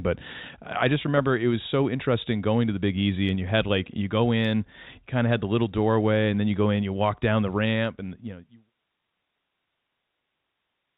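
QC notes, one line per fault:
Nothing stood out on listening to this speech.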